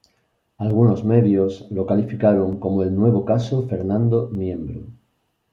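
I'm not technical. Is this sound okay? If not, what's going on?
No. From about 0.70 s to 5.26 s the speech has a regular click roughly every 0.91 s, about seven in all. These are likely clock drift buffer slips: two devices keeping slightly different time, so every so often a tiny chunk of sound gets dropped or repeated.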